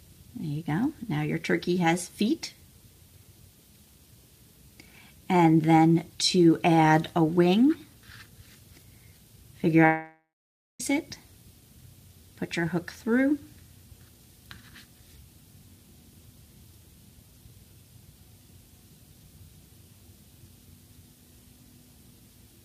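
At 9.85 s the audio cuts out until 10.81 s, a gap of 0.95 s. The last sound first carries on as a fading buzz or hiss. About 0.55 s of the gap is silence. The audio then returns further on, and the stretch that should have filled the gap is gone. This is a long network dropout. Packets likely stopped arriving, and the receiver covered the hole with a fading copy before falling silent.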